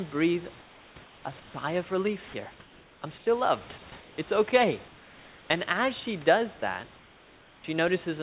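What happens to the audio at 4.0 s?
Around 4.0 s the real room background disappears and is replaced by a flat, featureless hiss, which holds from 3.90 to 4.18 s before the natural background returns. This is comfort noise in place of the background. The likely cause is discontinuous transmission: the sender stopped sending audio during a pause it judged to be speechless, and the receiver filled the gap with synthetic noise roughly matched to a room tone that sits about 25 dB below the speech.

Right at the onset, at 3.9 s, a brief sliver of sound, roughly 10 ms, is cut away, so the sound clips off abruptly into the noise. This is sound dropped by the voice detector. The detector likely mistook that bit of sound for background and switched to comfort noise a moment too early, so that fragment was never sent.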